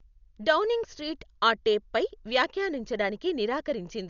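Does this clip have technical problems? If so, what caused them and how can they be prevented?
Yes. Throughout the speech, an encoder starved of bits, likely Dolby Digital compression at a rate that fits about 48 kbps, narrowed the band and left many frequency lines without mantissa bits, filling them with dither noise. Nothing remains above 6.9 kHz, so the sound is dull, with rough, fluttering noise around tonal parts. Encoding at a much higher bitrate would prevent this damage.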